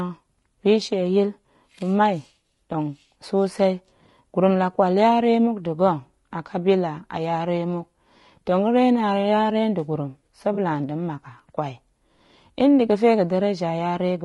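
Throughout, the speech sounds rough and grainy, with noise filling the gaps between harmonics and a thin, synthetic top band. The damage is plainly audible and is likely low-delay AAC compression, the AAC-ELD kind, at a rate near 32 kbps, whose short frames resolve pitch poorly.

From 10.53 to 10.58 s, just before "nda̱ mmak", there is a brief smeared, noisy patch lasting about 40 ms. This is AAC frame loss with concealment, consistent with two dropped frames: the decoder rebuilt the gap from the preceding spectrum rather than the real signal.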